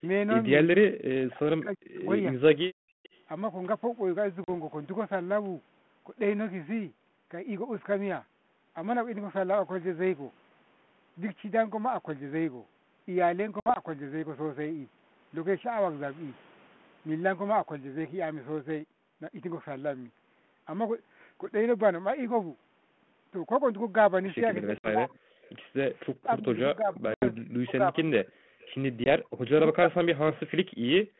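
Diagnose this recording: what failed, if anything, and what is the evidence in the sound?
The near-end sound is pulled down by roughly 40 dB at 0.0 to 0.04 s, 1.19 to 2.42 s and across much of 24.64 to 30.4 s, dipping and breaking into pieces. The pattern is most likely speech suppressed in double talk. The call-processing echo canceller could not tell local speech from loudspeaker echo while both ends were active, so it attenuated everything.

From 2.77 to 3.03 s the room sound behind the talker drops by about 34 dB and then returns. This is background gated by the echo canceller, a call-processing stage. While the far end was playing through the loudspeaker, the canceller clamped the microphone hard and released it once playback eased.

Faint delayed copies of the speech appear at 3.03 to 3.2 s, 25.45 to 25.5 s and 28.6 to 28.66 s. Each trails the original by 354 ms and sits roughly 30 to 35 dB below it. 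The likely cause is echo leak: a loudspeaker-side echo canceller failed to remove all of its microphone pickup and sent the residue back.

Hard-edged silent holes appear at 4.44 to 4.49 s (40 ms), 24.78 to 24.87 s (60 ms), 27.14 to 27.26 s (80 ms) and 29.04 to 29.08 s (20 ms). At 13.6 to 13.8 s there is 80 ms of gaps spread over 160 ms, the longest lasting 60 ms. These are packet loss on an ADPCM call at the network stage. Lost packets were filled with silence, which threw the G.726 decoder's predictor and step size out of step with the sender's. Speech therefore resumes after each hole slightly distorted before it settles. The underlying codec is G.726 at 32 kbit/s, with a telephone band of about 150 Hz to 3.4 kHz.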